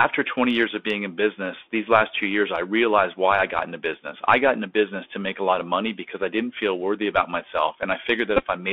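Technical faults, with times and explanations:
throughout: Bluetooth CVSD headset codec. Narrow, boxy sound confined to about 250 Hz to 3.5 kHz, with scratchy s sounds and granular hiss. One-bit up/down coding at 64 kHz cannot track sharp changes.
8.37 to 8.44 s: Bluetooth headset packet repeated. Brief buzzy roughness near 267 Hz, with runs up to about 15 ms. Lost packets were replaced by re-decoding the previous 3.75 ms packet.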